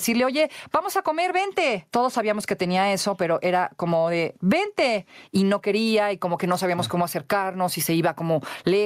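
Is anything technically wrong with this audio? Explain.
Yes. Gain pumping runs through the whole speech clip: the gain is pulled down whenever the talker gets loud and recovers afterwards, with a swing of around 15 dB. The likely cause is input gain set far too high, with a fast limiter or compressor clamping each loud sound, so loud and soft passages sit unnaturally close and the sound feels squashed. Unlike a noise gate, pumping does not cut the gaps to silence. The gain rises and falls with the level of the speech.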